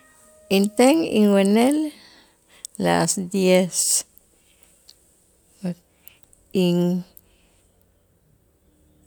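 Listening closely to the speech, nothing stood out as a technical fault at any point.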